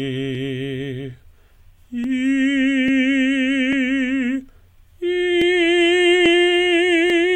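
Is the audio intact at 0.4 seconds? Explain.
No. At 0.4 seconds the music is inside a run of clock drift buffer slips lasting from 0.35 to 7.1 s: a click or pop every 0.84 s, about ten in all. The likely cause is two devices on independent clocks differing by around a thousandth, so the buffer drifts until a small block, a few dozen samples, is dropped or repeated. A spectrogram shows evenly spaced thin vertical broadband lines. The waveform shows matching small step discontinuities.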